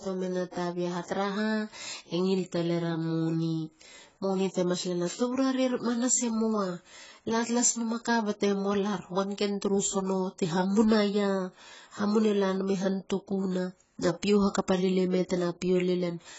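The speech sounds dull and smeared from start to finish, with nothing above about 7.7 kHz and a watery, fizzy warble on sustained sounds and sibilants. This is likely heavy AAC compression, with an artefact level that fits an AAC-LC stream at around 16 kbps.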